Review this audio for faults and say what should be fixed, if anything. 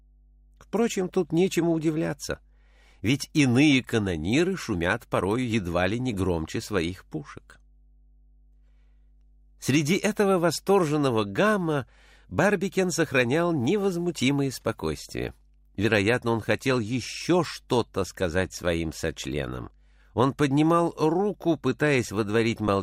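There's mains hum running the whole way through: a steady 50 Hz tone sitting roughly 35 dB under the signal, with a few low harmonics riding on it. That's power-line energy leaking in, typically from a ground loop or a transformer close to the cabling. To fix it, break the ground loop with a DI box or isolator and keep audio lines away from power supplies.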